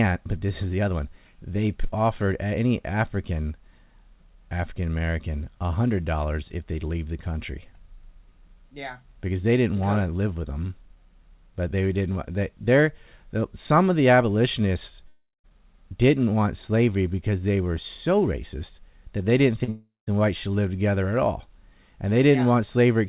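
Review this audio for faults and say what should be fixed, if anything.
A long network dropout, likely from a stalled connection, cut about 0.36 s at 15.08–15.46 s and about 0.38 s at 19.69–20.09 s. Each gap starts as a fading continuation of the last sound, then about 170 ms of silence, and the audio resumes without the missing stretch. Preventing this needs a more stable network route or a larger jitter buffer, with redundancy so longer outages can be bridged.

A short concealed packet loss at 19.64–19.69 s dropped about 40 ms, which the receiver patched with a brief continuation. It sounds like a momentary smear just before the second dropout. Enabling forward error correction or packet redundancy on the sending side would recover isolated losses like this one.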